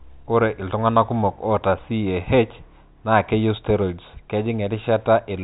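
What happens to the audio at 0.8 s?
Nothing goes wrong at 0.8 s: the speech carries on intact through that moment, with only the narrow telephone bandwidth of the G.711 line, which passes nothing above about 3.8 kHz.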